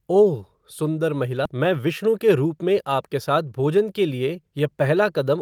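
A skip ahead at 1.45 to 1.47 s drops about 0.7 s of speech with no fill, so playback jumps forward and the two sides join almost directly. A jitter buffer speed-up follows from 1.55 to 3.78 s. The receiver trims short pitch-period pieces, about a fifth of a second in total, so the speech runs at 108% speed and sounds hurried while the pitch stays the same.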